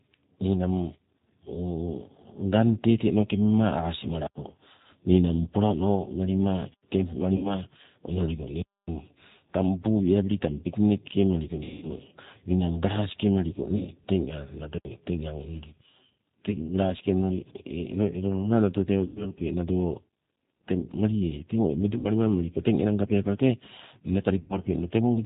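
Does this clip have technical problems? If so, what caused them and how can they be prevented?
Yes. Throughout, the speech sounds rough, slightly synthetic and dull, with nothing above 4 kHz. This is G.729 codec damage: at 8 kbit/s the voice is rebuilt from a vocal-tract filter, pitch predictor and a few pulses per frame. A wideband codec such as G.722 or Opus at a higher bitrate would prevent it.

At 7.36–7.56 s, 11.63–11.87 s (after "tang piknik ke meliko"), 13.77–13.92 s (after "ninang galasike meliko"), 19.06–19.29 s, 21.99–22.06 s and 24.39–24.54 s, the voice is stretched out and fades, and stays weak briefly afterwards. This is VoIP packet loss concealed by the speech codec. The gaps run from 50 to 190 ms, which fits runs of lost 10 ms frames. The decoder stretches its last pitch and filter, lowering the gain, and recovery lags because each frame builds on the previous one. Better network QoS, forward error correction or redundant packets would prevent it.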